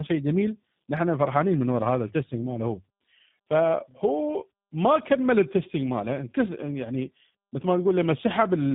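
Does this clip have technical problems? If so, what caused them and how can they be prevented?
Yes. The speech suffers from tandem speech coding throughout the clip: it sounds rough, muffled and warbly, with nothing above about 3.8 kHz. The sound points to a path that passed through G.726 at 32 kbit/s, then G.711 A-law, then G.729A at 8 kbit/s, so two lossy speech coders ran in a row, and the G.729A stage had to re-encode already degraded audio, compounding its errors. Prevention: keep one codec end to end, or pass the coded stream through transparently instead of transcoding at each link.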